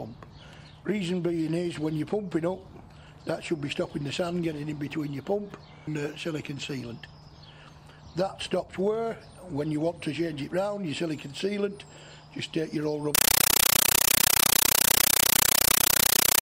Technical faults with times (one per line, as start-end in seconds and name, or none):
13.15-16.41 compressed stream played as audio